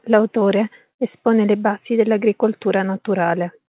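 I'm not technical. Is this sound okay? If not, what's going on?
Yes, nothing has gone wrong in this speech recording. It has passed through an ordinary phone-call connection, which keeps nothing above about 4 kHz, so it has the narrow, telephone-like sound you'd expect on a call.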